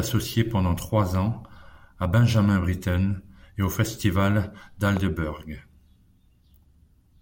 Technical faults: loud pop

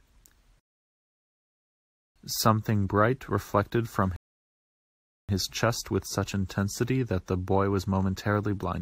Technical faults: rebuffering stall

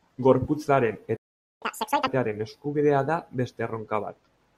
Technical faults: playback stall; catch-up at higher speed

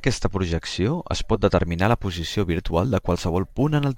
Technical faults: sample clock jitter

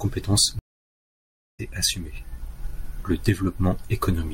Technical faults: stream reconnect

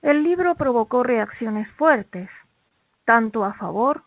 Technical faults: scattered short gaps

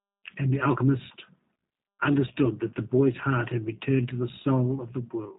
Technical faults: G.729 codec

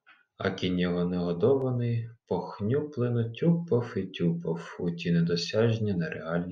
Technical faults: clock drift buffer slips

